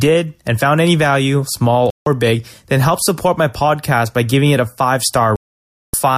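Speech that cuts to silence twice, from 1.90 to 2.07 s after "found any value small" and 5.36 to 5.94 s after "giving it a five": a digital broadcast dropout, the receiver muting while frames failed.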